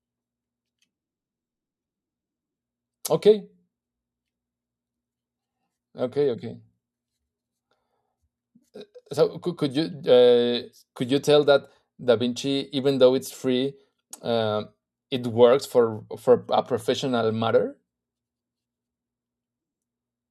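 No technical faults can be heard anywhere in the recording. The speech is clean, and nothing in the signal calls attention to itself.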